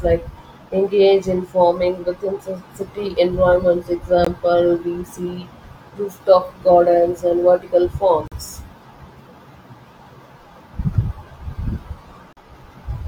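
Speech interrupted by gaps between stream segments: hard-edged silences of 19 to 41 ms at 4.25–4.27 s, 8.28–8.32 s and 12.33–12.37 s, repeating every 4 s at segment joins. No audio is lost.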